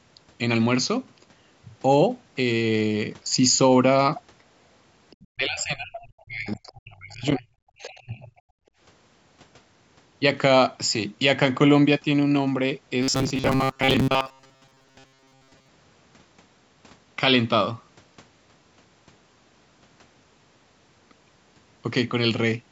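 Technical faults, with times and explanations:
5.1–5.27 s, 6.67 s and 7.82–8.0 s, other side's voice leaking through: faint scraps of a second voice sit well under the talker, loudest in the last one. Most likely the far end's loudspeaker audio getting back into the mic and not fully cancelled by the echo canceller.
5.31–7.46 s and 7.8–8.32 s, speech suppressed in double talk: the talker's level drops away in pieces, going nearly silent in the first stretch and dipping less deeply in the second. Likely both sides talking at once, so the canceller turned everything down.
8.6–8.78 s, background gated by the echo canceller: the room sound drops by about 31 dB for a moment, then comes straight back. The canceller clamped the mic hard while the loudspeaker played and released it once the playback stopped.
13.03–15.68 s, robotic sound from repeated short buffers: the voice goes metallic with a fixed 133 Hz buzz, still loosely tracking the speech, and most of the audio here is repeats. 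Likely a tiny chunk looped over and over, which fits a buffer of about 7.5 ms.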